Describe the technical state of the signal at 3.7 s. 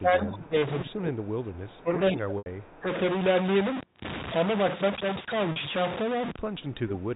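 At 3.7 s the speech carries a stuck-bit distortion that runs through the whole clip, likely one data bit held fixed so about half the samples shift by that bit's weight. Unlike clipping, it fills pauses with noise and doesn't depend on loud peaks. The 4 kHz telephone band limit is heard alongside it.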